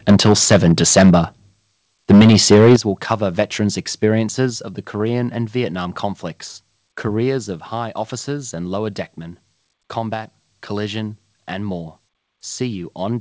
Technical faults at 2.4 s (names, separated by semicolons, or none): microphone overload